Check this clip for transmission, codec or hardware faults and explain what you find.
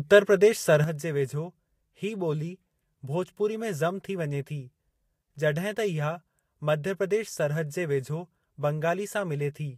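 There is one fault in this speech clip. At 0.84 s the level falls abruptly by about 6 dB and stays down to the end, with no change in tone or clarity. The sound fits one channel dropping out: with identical material on both sides of a stereo feed, losing one leaves the mono sum at half amplitude. The likely cause is a lost channel somewhere upstream, such as a failed link, connector or input.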